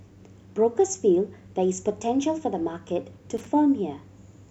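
A worn or dirty contact briefly made and broke, causing loose connector crackle from 3.37 to 3.47 s, an irregular scratchy burst chopping the speech.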